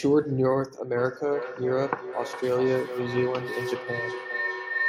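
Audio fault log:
0.97–4.88 s, feedback howl: from 0.97 s a tone near 2 kHz builds and holds to the end of the clip, peaking about 6 dB below the speech, with the loop repeating roughly every 400 ms. Two devices sharing one room and call create a loop from loudspeaker to microphone and back with gain above unity, so each pass grows and narrows toward the frequency the loop favours. Unlike an ordinary echo, the repeats swell rather than fade and collapse into a single pitched tone.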